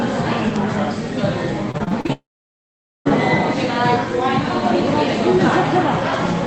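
The recording is of everyday sound, carried over a call link whose Opus coding tops out around 8 kHz. From 1.71 to 2.10 s it turns choppy, with short pieces dropping out. This is repeated packet loss (robotic sound). Six separate holes open in that span, the longest about 38 ms, and each is patched by stretching the sound just before it. Roughly 38% of the stretch is synthetic fill rather than real audio. At 2.12 s the sound collapses into a fading buzz and then near silence for about 0.8 s, resuming at 3.07 s with that portion simply gone. This is likely a long network dropout: nothing arrived, the receiver briefly extended the last sound, and the missing audio was never recovered.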